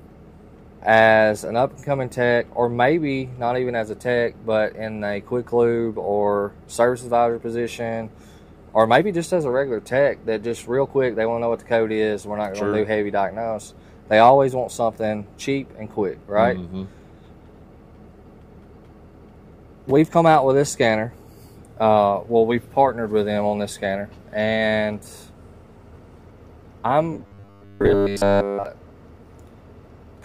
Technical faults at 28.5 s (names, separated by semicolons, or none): robotic sound from repeated short buffers